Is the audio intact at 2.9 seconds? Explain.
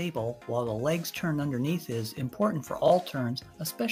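No. Around 2.86 to 2.9 s the sound briefly jumbles, a tiny scrambled flicker where the flow should run smoothly. This is chunks out of order: a 20 ms chunk arrived late by one chunk and plays after the chunk that should follow it. Nothing goes missing, but the swapped order leaves three hard joins across that 40 ms stretch.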